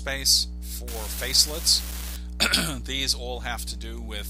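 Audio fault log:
0.88–2.16 s, unreliable data bit: one marginal data line flips its bit in a random share of samples, each error adding a spike of the same size, about -22 dBFS. The spikes land at random, so they build into a steady crackling fizz that persists through quiet gaps.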